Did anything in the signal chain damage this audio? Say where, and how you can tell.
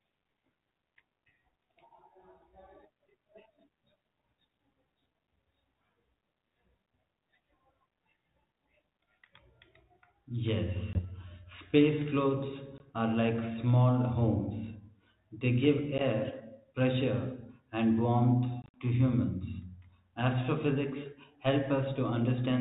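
Yes, the network dropped packets on what sounds like a 32 kbit/s G.726 call: packet loss on an ADPCM call. Hard-edged silent holes sit at 10.93–11.05 s, 12.78–12.81 s just before "are like small", 15.98–16.01 s, and 18.62–18.81 s between "and warmth" and "to humans". That last stretch has about 90 ms missing in bursts. Each gap knocks the decoder's predictor and step size out of step, so audio returns slightly distorted, settling within tens of milliseconds.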